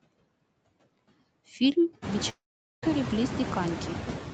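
It's a speech clip with noise suppressor artifacts all the way through: the suppressor pulls steady background noise down by about 17 dB in the gaps, so the hiss dips between phrases and swells back under them. That gets more obvious once the room noise climbs by about 17 dB around the 2 s mark. From 2.29 to 2.88 s there's a gap that sounds like a long network dropout, likely lost packets. Roughly half a second of audio goes missing, a fading buzz briefly stands in for it, then about 0.43 s of near-silence follows before the sound picks up again further along.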